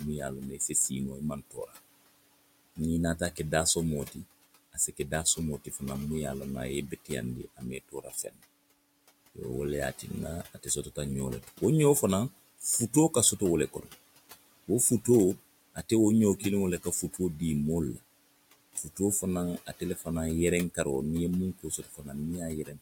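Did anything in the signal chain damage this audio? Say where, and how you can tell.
Yes. Noise suppressor artifacts run throughout, at the call-processing stage. The room noise, about 18 dB under the speech, is pulled down about 20 dB between phrases and rises underneath them.

The same stage causes speech cut by the noise suppressor at 0.51–1.76, 2.76–5.82, 6.9–8.41, 9.35–11.62 and 12.58–22.8 s. Quiet speech gets mistaken for noise and dips about 13 to 20 dB, sounding swallowed.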